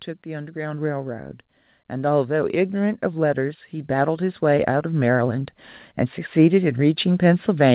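From 1.88 to 5.55 s the automatic gain is rising: the AGC judged the input too quiet and eased its gain up about 9 dB, so voice and background swell together, all inside a band that stops at 4 kHz, which fits a narrowband call codec like G.711.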